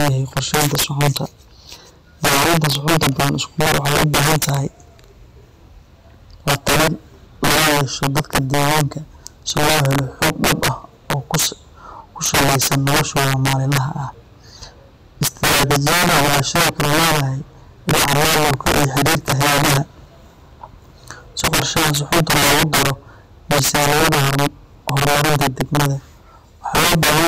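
Integer overflow runs through the whole of this speech recording, from start to finish. The signal has been driven about 15 dB past full scale, and instead of being held at the ceiling, samples that exceed it wrap around to the opposite extreme of the range. Only around a fourteenth of the samples go over, so the damage lands on the louder peaks, each turning into a harsh, violent crack far sharper than ordinary clipping.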